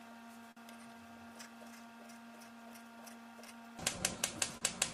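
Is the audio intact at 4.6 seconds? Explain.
No, not quite. Right around there, from 4.57 to 4.63 s, there's a short stall from a late packet. A packet didn't arrive when it was due, so the jitter buffer ran dry and the receiver held the last bit of sound for about 39 ms until the packet showed up, then carried on from the same spot. Nothing actually goes missing, but that moment hangs a touch too long, with a faint buzzy or dipped quality.

The reason the buffer was running that thin is clock drift between sender and receiver, present through the whole clip. The sender's clock is running slow, by roughly 4 percent, so audio arrives a little slower than it's played out and the buffer keeps draining. A late packet then tips it over into an outright empty moment like the one at 4.6 s.

Just before that, from 1.81 to 4.52 s, you get the repeated timing corrections that the drift forces. The receiver keeps stretching the audio by repeating tiny pieces, in effect playing at about 97 percent speed, adding up to about a tenth of a second over that stretch. 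Each edit is small and unevenly spaced, so it comes across as slight hiccups or a slightly unsteady pace rather than obvious glitches, and it leads straight into the stall.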